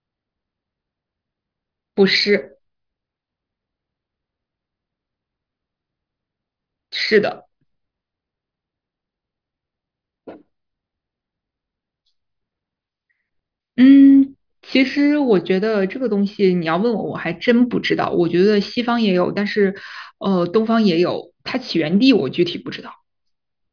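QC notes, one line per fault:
No fault found in this speech clip. Nothing heard calls for a line of its own.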